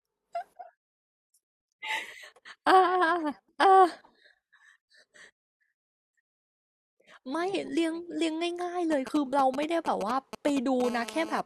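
From 8.92 to 10.82 s, GSM signalling bursts intrude: a nearby 2G phone's radio pulses are rectified into galloping 217 Hz ticks, roughly 10 dB below the speech, visible as clustered vertical stripes. From 10.84 to 11.41 s, a steady GSM phone buzz follows, a raspy 217 Hz drone about 16 dB down, drawn as evenly spaced harmonic lines across the spectrogram.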